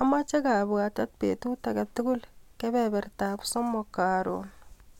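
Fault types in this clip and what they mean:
Nothing here needs a name or an explanation, since the speech comes through without any fault to point to.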